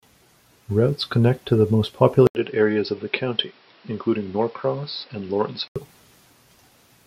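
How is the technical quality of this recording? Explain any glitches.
The recording has one clear glitch. From 2.27 to 5.76 s, after "connect to the most", the input likely switched to a poorer device. An 80 ms silence marks the switch. Then the sound turns dull, with nothing above 5.6 kHz. The level drops about 5 dB, and new noise sits roughly 35 dB down.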